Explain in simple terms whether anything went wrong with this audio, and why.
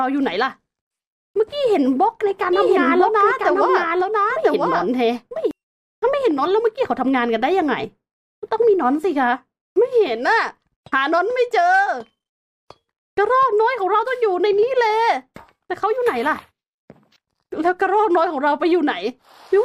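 Something did go wrong, between about 2.53 and 5.51 seconds. For those three seconds there's a doubled audio track: the same sound plays twice, with a second copy trailing about a second behind and roughly as loud as the original. That copy is clean and dry, with no echo tail, and it cuts in and out abruptly. The likely cause is the audio being picked up a second time through a slower route, or an edit leaving two copies out of step.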